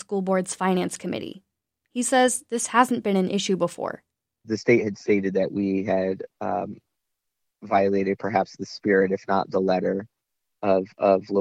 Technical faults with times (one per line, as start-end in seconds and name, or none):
none